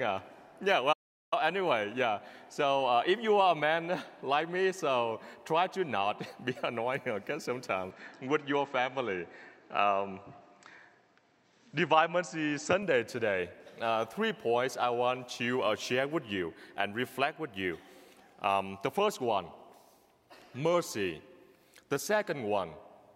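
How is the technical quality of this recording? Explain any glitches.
Two faults affect the technical quality: a brief playback stall near the start and a stretch where the sound comes from a poorer input device.

From 0.92 to 1.33 s there is a playback stall, likely because the player ran short of data or its thread was held up, so nothing reached the output for about 390 ms. The sound breaks off abruptly, leaving a clear gap of silence, and then resumes once the player catches up. The cut is sudden rather than a fade.

From 7.9 to 12.8 s the input switched to a poorer device, likely a change from one microphone to another of lower grade mid-recording. The replacement passes a narrower band, so the sound turns duller and boxier. The switch has no silence and no obvious jump in loudness. A faint new background noise, well below the signal, also comes in. At 12.8 s the fuller, brighter tone returns.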